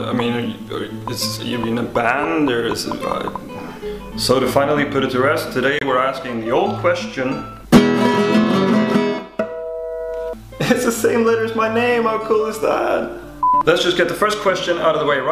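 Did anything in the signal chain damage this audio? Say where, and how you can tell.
Yes. A corrupt frame was muted at the codec: bit errors made the decoder reject one frame, leaving an abrupt 44 ms silence from 5.79 to 5.83 s, with timing preserved.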